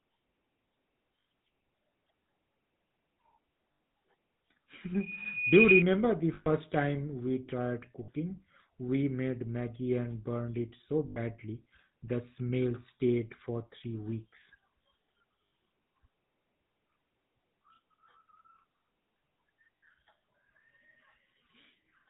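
Throughout, the speech carries the GSM full-rate codec's plainly audible buzzy, gravelly roughness and nothing above 4 kHz, which fits 13 kbps full-rate GSM. The buzz comes from pulse-driven vocal-tract modelling, not the swirly warble of a music codec.

Lost GSM frames occur at 1.2–1.26, 3.72–3.8, 6.34–6.47 (before "time we tried"), 8.04–8.09 (after "time we tried"), 11.08–11.19 (after "and burned it so"), 15.48 and 19.77–19.83 s. Each holds the last sound as a rough metallic ring rather than a silent dropout.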